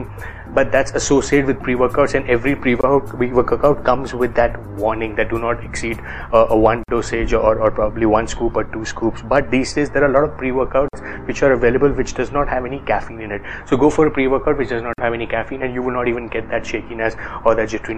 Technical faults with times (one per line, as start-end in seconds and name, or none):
2.81-2.83 gap at a join of encoded pieces
6.83-6.88 gap at a join of encoded pieces
10.88-10.93 gap at a join of encoded pieces
14.93-14.98 gap at a join of encoded pieces